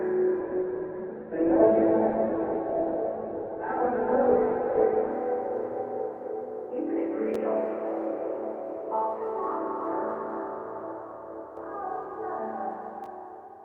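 From 0.43 to 5.21 s the sound turns muffled and rough, with a watery grain, then clears. This is a call bitrate drop: the encoder was pushed from 48 kbps down to 7 kbps, coding more coarsely and cutting the bandwidth from 20 kHz to about 4 kHz.

At 7.34 s, and again from 13.04 to 13.06 s, there is a brief jumbled moment. Both are chunks out of order: pieces about 5.33 ms long played one chunk late and then three chunks late, leaving hard joins.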